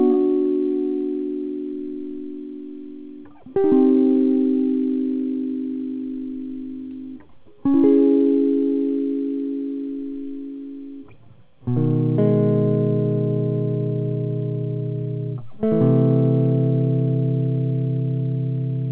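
A music clip with no technical faults. It has passed through a WebRTC call path with nothing above 4 kHz, a narrowband limit that fits a G.711 mu-law codec at 64 kbps.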